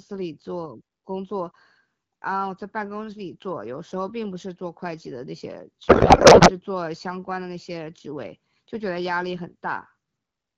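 At 5.87 s the speech turns to garbled noise and warble until 6.51 s. This is a codec payload misread. The decoder takes bits from the wrong positions, which points to octet-aligned AMR frames read as bandwidth-efficient. The surrounding HD Voice sounds clear, fitting AMR-WB at about 12.65 kbit/s.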